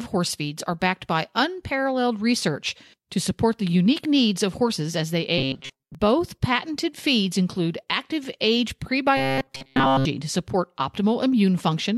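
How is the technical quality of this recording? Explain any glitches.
Two glitches stand out. Robotic sound from repeated short buffers occurs at 5.38–5.95 s and again at 9.17–10.05 s. Audio likely arrived too seldom, so a fragment of about 7.5 ms was looped while most of the real audio was skipped. The looping imposes a rigid, metallic 134 Hz buzz on the sound.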